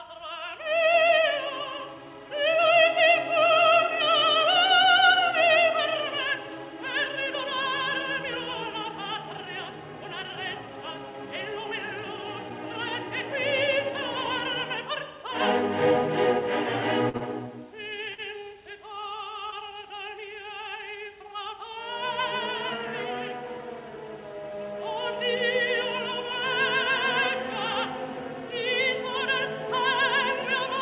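At 17.09 s the sound hangs for a moment. The last bit is held about 48 ms too long with a faint buzzy flatness before it moves on. This is a short stall from a late packet. The packet arrived after it was due, so the jitter buffer ran dry and the receiver stretched what it already had until the packet came. Playback then resumed from the same point, with nothing lost but everything after it about 48 ms later.

Right after the stall, from 17.17 to 17.23 s, there is a brief smeared wobble, and similar ones follow at 18.14 s and 19.50 s. Each is short concealed packet loss. About 30 ms of audio never reached the decoder, and the receiver filled the gap (36 ms, 40 ms and 22 ms respectively) by extending the preceding sound before blending back in. All of this sits on top of telephone-band audio with nothing above 4 kHz, which fits G.711 A-law coding.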